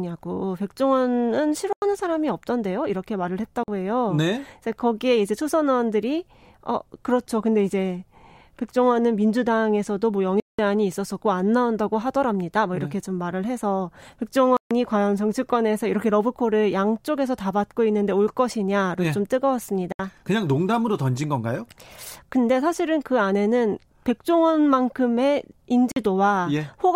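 The speech cuts to silence at 1.73, 3.63, 10.40, 14.57, 19.92 and 25.92 s, for 93, 46, 186, 139, 70 and 46 ms, then resumes as though it had played on. This is likely Bluetooth dropout from late, discarded packets. Waveform and spectrogram show blank, sharp-edged gaps.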